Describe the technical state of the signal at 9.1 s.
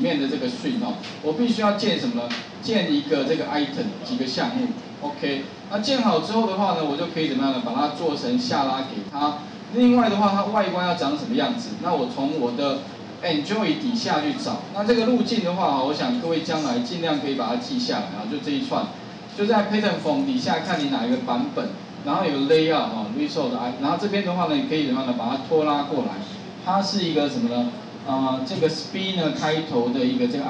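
One channel drops out from 9.09 to 9.21 s. For about 0.12 s the sound falls abruptly by about 6 dB and is otherwise unchanged. The likely cause is one stereo channel going silent briefly, halving the mono sum.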